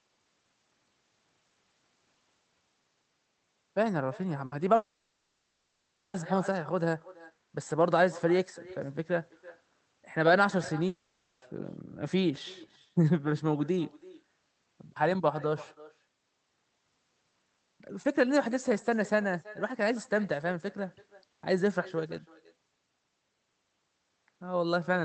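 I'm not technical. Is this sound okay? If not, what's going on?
No, it has a few problems. Throughout, there's an echo with no canceller: your voice comes back roughly a third of a second later as a quieter, thinner copy, because the other end's speaker is feeding straight into its microphone and nothing cleans it up.

At 4.46 s there's a short burst of packet loss. For about six hundredths of a second the last sound just hangs and fades, then the talking jumps ahead, skipping a tiny piece.

From 4.76 to 6.17 s, and again from 10.88 to 11.45 s, there's a stretch where the sound turns into a drawn-out fading buzz or hiss, then resumes with that chunk gone. That's likely a long network dropout, with the audio simply never arriving.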